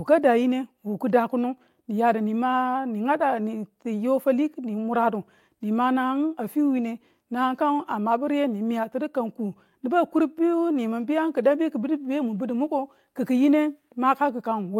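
No faults can be heard anywhere in this speech recording.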